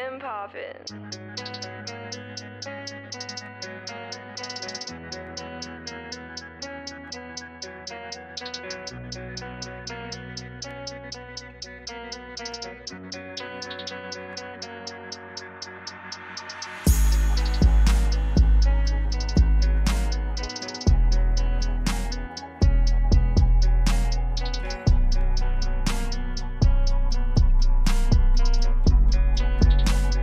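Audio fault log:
1.64–28.84 s, clock drift buffer slips: a click recurs about every 1.81 s across this span, roughly fifteen times, each a brief discontinuity in the sound. The cause is likely two devices on separate clocks disagreeing by something on the order of 100 ppm, so the buffer between them slowly drifts until a few samples, around seven, are dropped or repeated. The steady spacing of the clicks reflects that constant rate mismatch.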